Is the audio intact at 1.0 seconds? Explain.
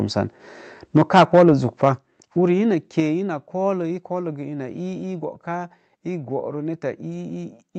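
No. From 0.96 to 1.5 s the sound shows microphone overload: peaks are flattened and crackle harshly, likely because the input level ran about 10 dB past the converter's limit. Unlike codec distortion, it affects only the loudest moments, clipping a noticeable share of samples. At 0.97 s a microphone volume stepped down fault follows, with level and background dropping together by about 2 dB in one step. The likely cause is call software reacting to the overload, and the single abrupt change sets it apart from a gradual fade.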